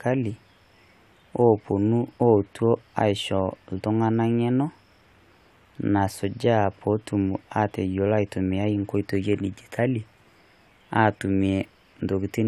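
No technical faults are audible anywhere here.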